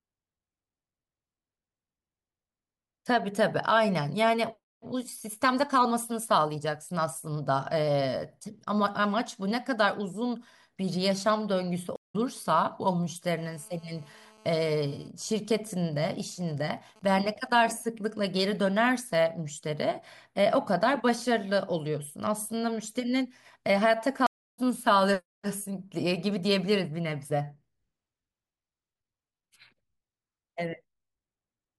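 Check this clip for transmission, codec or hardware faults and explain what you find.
The clip of speech has two kinds of fault, a stream reconnect heard twice and interference from a nearby 2G phone that first buzzes steadily and then breaks into signalling bursts.

Stream reconnect at 11.96 to 12.16 s and 24.27 to 24.60 s. The connection dropped, the player fell silent for 184 ms and then 315 ms, and a new decoder picked up mid-stream. Unlike a plain dropout, the audio resumes further along, about 150 ms later the first time and roughly 300 ms later the second, so material is skipped.

GSM phone buzz from 13.37 to 15.08 s. A phone on a call transmits in bursts 217 times a second, and the audio circuit rectifies them into a hard, raspy buzz full of harmonics, about 31 dB below the signal. It stays steady and has nothing to do with the speech, which separates it from ordinary mains hum.

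GSM signalling bursts from 15.09 to 17.50 s. A phone is on a call, but its user has gone quiet, so it transmits only short groups of bursts. Instead of a continuous buzz, these come through as even ticks with a longer 217 Hz buzz twice a second, around 30 dB down.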